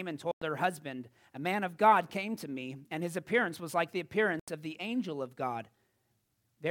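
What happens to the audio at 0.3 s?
A dropout runs from 0.31 to 0.42 s, likely a Bluetooth dropout. The speech cuts to silence for about 102 ms, then returns just before "her husband". The gap fits roughly five audio packets failing to reach the headphones in time and being discarded. Playback stays muted until valid packets arrive, and the speech resumes further along, as though it had kept playing through the hole, so that stretch is simply missing.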